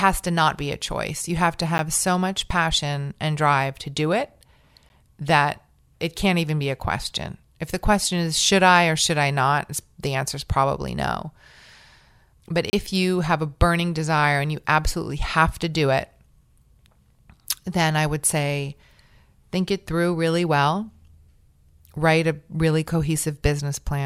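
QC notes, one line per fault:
1.78 s, 4.89 s and 12.70–12.73 s, block of digital silence: sharp ticks, the last a short hole before "you have a burning", where blocks of about 10 ms and 30 ms cut to silence without fades.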